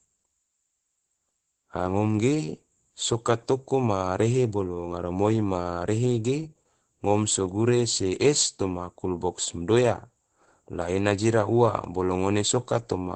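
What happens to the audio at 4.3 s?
At 4.3 s, as throughout the clip, Opus voice compression muffles and roughens the speech; a spectrogram shows nothing above 8.6 kHz, fitting wideband SILK near 12 kbps.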